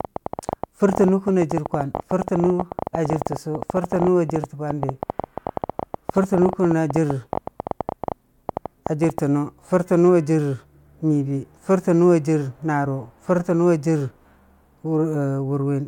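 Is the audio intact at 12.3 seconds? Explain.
Yes, the speech at 12.3 seconds is intact, with nothing at that moment that would point to a technical fault.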